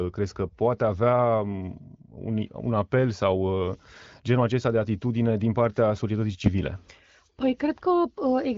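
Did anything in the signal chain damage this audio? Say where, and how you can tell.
No, nothing in the signal chain damaged this audio.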